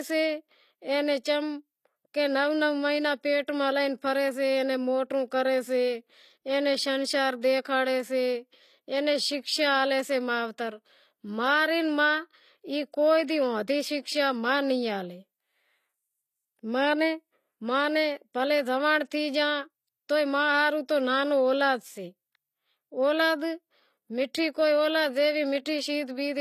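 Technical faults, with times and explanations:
Throughout, HE-AAC compression, plainly audible: the treble sounds synthetic, and the s sounds come out gritty and lispy. That's likely spectral band replication rebuilding the highs from lower bands, at a rate that points to roughly 24 kbps, with nothing above 14.9 kHz.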